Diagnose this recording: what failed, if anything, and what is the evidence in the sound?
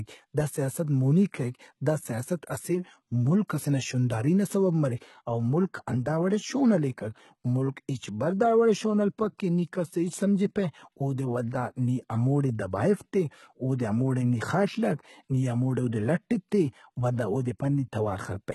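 The codec stage failed: this speech carries heavy HE-AAC compression damage throughout, likely from a very low bitrate around 16 kbps. Sibilants sound gritty and lispy, and a spectrogram shows treble that is copied, blocky and harmonically misaligned, ending abruptly at 11.8 kHz.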